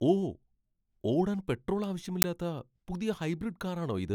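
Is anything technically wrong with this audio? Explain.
Yes. From 2.22 to 2.24 s, just after "ഓടാൻ പെട്രോൾ", the speech is cut by a sudden, loud burst of harsh digital noise lasting about 20 ms. This is an uninitialised buffer. The playback chain sent out a block of memory before any audio had been written into it, so whatever leftover data sat there was played as samples. The burst's length fits a 20 ms buffer.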